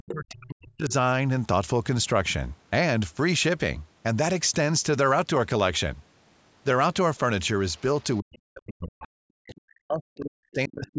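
From 0.00 to 0.92 s there is speech suppressed in double talk. The echo canceller, likely caught with both ends talking at once, could not tell the near talker from loudspeaker echo and pulled the whole microphone signal down. The speech sinks by as much as about 40 dB, roughly a second in all. Inside that stretch, at 0.09 to 0.13 s, comes the first instance of the other side's voice leaking through. The canceller likely left part of the far-end playback in the microphone path, and a brief scrap of a second voice is heard only about 10 dB under the speech. Further leakage follows at 7.71 to 7.81 s, about 35 dB down, and at 8.00 to 8.39 s, about 30 dB down. These are faint traces of the other voice. From 8.20 s to the end the suppression returns. The echo canceller likely again treated overlapping talk as echo and ducked it by up to about 40 dB over roughly three seconds. The call microphone processing is also audible in the restricted bandwidth, with nothing above 8 kHz.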